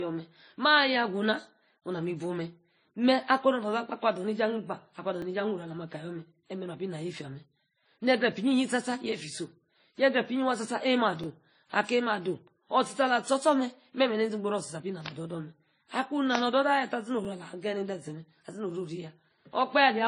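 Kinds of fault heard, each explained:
Transcoding between lossy codecs: The speech has nothing above 10.1 kHz. Two kinds of coding artefact are heard together, each encode adding its own damage on top of the last. The sound fits a low-rate WMA encode, likely followed by a low-rate MP3 one.
Overlapping chunks: The audio was handled in 6-second chunks, and each chunk starts slightly before the previous one ends. At every join a 13 ms piece plays twice, heard as a brief click or stutter. This happens at 5.22, 11.24 and 17.25 s.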